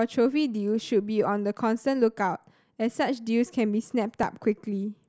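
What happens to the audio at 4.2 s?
At 4.23 s there is a dropped buffer (overrun): a small slice of the speech, only a few milliseconds, is missing, and the sound on either side is butted together with no gap. This is likely because the samples were not read before the hardware overwrote them, leaving a slight jump forward.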